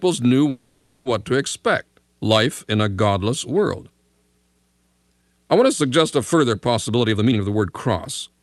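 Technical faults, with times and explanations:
0.49–1.07 s, call audio freeze: For about 0.58 s the sound stops moving on and the last instant is stretched into a buzzy, hissing tail that fades without reaching silence. The likely cause is delayed packets leaving the jitter buffer empty, with the receiver extending the final sound until they arrive. Unlike a loss dropout, the audio then resumes exactly where it halted. Nothing is skipped, so the freeze adds a gap and about 560 ms of delay rather than removing anything.
6.88–8.37 s, jitter buffer speed-up: Right after "to suggest a further", the sound hurries along at about 127% of normal speed while its pitch stays put. The receiver is draining excess buffered audio by cutting out short pitch-period-sized pieces again and again, removing roughly 0.4 s in total. That steady pitch separates it from a simple playback-rate change, which would raise the pitch. 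The many tiny cuts also make it smoother than a single splice, which would drop a clear chunk.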